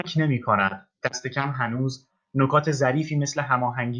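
Nothing in the speech stood out as a technical problem on listening.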